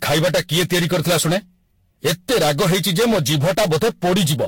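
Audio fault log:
Throughout: hard clipping. The speech is driven about 19 dB past what the chain can pass, so the peaks are sliced flat and nearly a third of the samples end up cut off at the converter's limit. The flat tops add dense high harmonics, so every loud syllable has a harsh fuzz and grit. It isn't just occasional crackle on the biggest peaks.
Throughout: generation loss. The audio sounds swirly, smeared and hollow, with blurred attacks and nothing above 16.6 kHz. That is more damage than a single pass at around 64 kbit/s would cause. The likely cause is Vorbis encoding and decoding repeated about seven times. Each pass quantises again on a shifted frame grid, so the noise and spectral holes pile up and the transients get softer each time.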